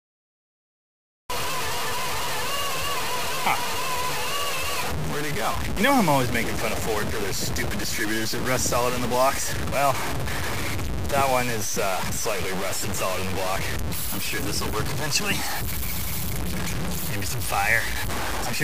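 The audio opens with digital silence until 1.30 s, then jumps in mid-sound: a cut-off start, where capture began late. There is no rising attack, which distinguishes it from a fade-in.

Throughout, a harsh, grainy distortion tracks the sound itself, with the error roughly as loud as the signal. This points to low bit depth without dither, likely truncation to about 4 bits. Unlike steady hiss, it changes with the sound and vanishes when the sound stops.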